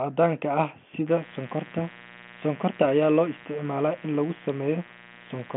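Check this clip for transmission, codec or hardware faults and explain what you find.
One hardware fault is present: mains buzz. It starts at 1.08 s and runs to the end. Switching spikes at twice the 60 Hz mains rate leak into the signal path, spreading harmonics well up the spectrum. The result is a steady, raspy buzz roughly 20 dB below the speech. The telephone-band sound, with nothing above 3.8 kHz, fits G.726 ADPCM at 40 kbit/s, with at most faint codec damage.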